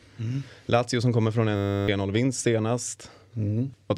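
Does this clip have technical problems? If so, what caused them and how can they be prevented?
Yes. From 1.56 to 1.88 s, just after "som kommer från", the speech gives way to a steady 100 Hz buzz. This is a system hang loop: the machine stalled while the audio hardware kept replaying the same 10 ms stretch of its ring buffer, 32 times over, and about a third of a second of speech was lost. The exact repetition and the short loop produce a pitched buzz rather than the machine-gun stutter of a longer buffer or the silence of a simple dropout. Running the audio thread at high priority with a watchdog that mutes output on a stall would prevent it.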